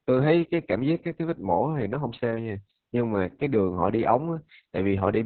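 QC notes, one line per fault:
throughout: Opus voice compression, heavy; nothing above 4.3 kHz, muffled, hoarse speech from coarsely coded SILK excitation, which fits narrowband coding near 6 kbps.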